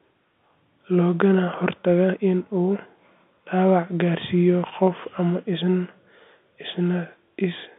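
The speech carries no audible technical faults.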